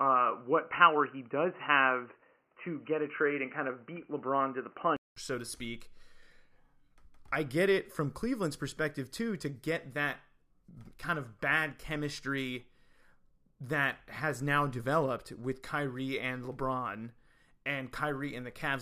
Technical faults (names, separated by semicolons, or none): input switched to a poorer device